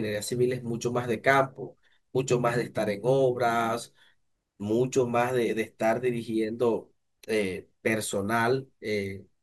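No technical faults are audible.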